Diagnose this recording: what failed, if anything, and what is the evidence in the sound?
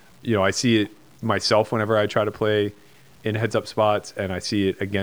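Across the whole clip the speech carries a grainy, buzzy distortion that rises and falls with the voice, with quiet syllables and decays turning gritty and sputtering, about 35 dB below the speech. This points to low bit depth without dither, likely from truncating to 8 bits at a sample-format conversion.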